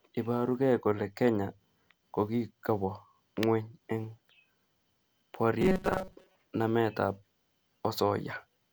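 From 5.61 to 6.35 s, the playback side was likely starved of fresh audio and kept refilling the gap by replaying its last short buffer, skipping real material for roughly 70% of that stretch. This is robotic sound from repeated short buffers: the loop repeats at 188 Hz, which fits a buffer of about 5.3 ms. The speech becomes a rigid, metallic buzz that only loosely tracks the words.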